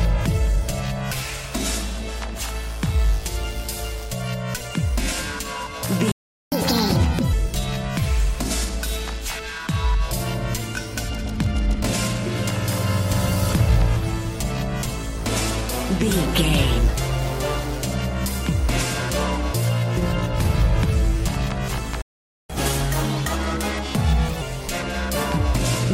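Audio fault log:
6.12–6.52 s: playback stall. The sound stops mid-flow and goes silent for about 400 ms. It then resumes. The likely cause is the player running out of data or its thread being blocked.
6.52–7.33 s: catch-up at higher speed. The audio plays at 1.5 times normal speed. Pitch rises by roughly seven semitones. The player is rushing through its backlog to recover lost time, then drops back to normal.
22.02–22.50 s: playback stall. Output goes silent again, this time for about 480 ms. The likely cause is again a starved buffer or a blocked playback thread.
22.50–24.41 s: catch-up at higher speed. Playback runs at 1.25 times speed for almost two seconds. Pitch sits about four semitones high. The gentler rate takes longer to win back the gap before returning to normal.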